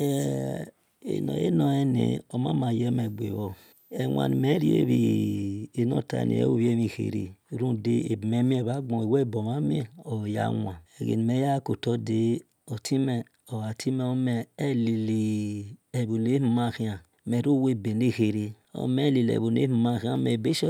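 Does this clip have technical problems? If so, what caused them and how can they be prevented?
Yes. A switching power supply running in an audible burst mode or beating with another supply caused a switching supply whistle from 3.02 to 5.35 s: a faint high tone, roughly 35 dB below the speech, drifting between 13.3 and 14.1 kHz. Powering the recording chain from a battery or linear supply prevents this.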